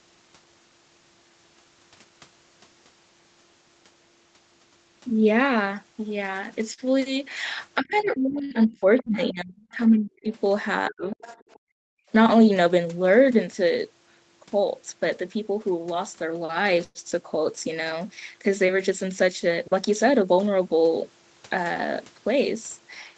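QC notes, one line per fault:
6.73–6.88 s, short stall from a late packet: one packet turned up late, so the jitter buffer emptied and the receiver held the last sound for about 44 ms until it came. Playback then resumed from the same point, leaving a slightly stretched, faintly buzzy sound with nothing lost.
7.80–10.30 s and 10.88–11.20 s, speech suppressed in double talk: the talker's speech sinks by roughly 35 to 40 dB in places, thinning and breaking up, for about 2 s in the first span and about 0.3 s in the second. Likely the echo canceller could not separate the talker from loudspeaker echo while both spoke.
7.93–8.09 s, 8.98–9.03 s, 9.24–9.31 s and 11.11–11.59 s, other side's voice leaking through: scraps of a second voice sit roughly 25 to 30 dB below the talker, brief in the first three, longer at 11.11 s. This is likely loudspeaker playback the echo canceller failed to remove fully.
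8.45–8.54 s, burst of packet loss: about 60 ms of audio never arrived in time. The receiver filled the gap by extending and fading the last sound, then jumped ahead, so that stretch is actually missing rather than delayed.
11.59–12.09 s, background gated by the echo canceller: directly after the leaked voice at 11.59 s, the room sound drops by up to about 40 dB for half a second, then comes back. The canceller clamped the microphone hard while the loudspeaker was active and released afterwards.
16.84–16.98 s, call audio freeze: playback stalls for about 110 ms, the held sound decaying into roughly 10 ms of silence, then carries on from where it stopped. Nothing is lost, but a pause is inserted, likely because delayed packets left the jitter buffer empty.
18.90–20.33 s, jitter buffer speed-up: the receiver shortened the audio by trimming small pitch-period slices repeatedly, removing about 0.1 s overall, so speech runs at about 106% speed with pitch unchanged and sounds slightly hurried. 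It was draining excess buffered audio to reduce delay.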